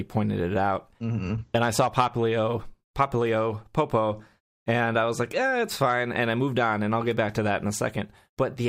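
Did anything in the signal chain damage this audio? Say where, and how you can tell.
No, nothing in the signal chain damaged this audio.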